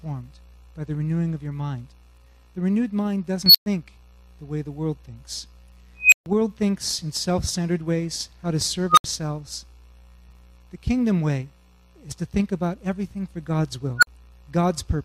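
A high tone swells to a clipped squeal and then drops into brief silence four times: at 3.46–3.66 s (near 4 kHz, 86 ms build-up, 116 ms gap), 6.00–6.26 s (about 3 kHz, 118 ms, 139 ms), 8.90–9.04 s (around 1.5 kHz, 77 ms, 70 ms) and 13.98–14.07 s (around 1.5 kHz, 43 ms, 46 ms). Each is an unstable filter: faulty coefficients let the recursion run away, its output overflows, and the audio cuts out until the filter resets.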